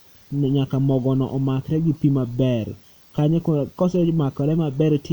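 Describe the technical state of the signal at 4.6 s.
At 4.6 s the speech signal is intact, with no audible technical fault at that moment.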